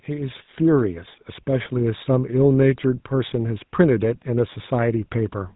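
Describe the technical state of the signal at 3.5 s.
GSM full-rate codec damage is present at 3.5 s, as it is through the whole clip. The speech is rebuilt from a vocal-tract model driven by sparse, regularly spaced pulses, consistent with a 13 kbps codec, giving plainly audible buzzy, gravelly roughness with nothing above 3.9 kHz.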